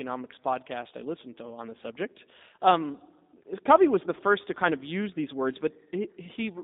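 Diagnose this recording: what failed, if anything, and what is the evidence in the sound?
The speech sounds narrow, rough and faintly synthetic throughout, confined to 200 Hz to 3.7 kHz. The fault is at the codec stage: G.729 compression, which fits an 8 kbit/s codec that rebuilds each short frame from a vocal tract filter, pitch predictor and sparse pulses.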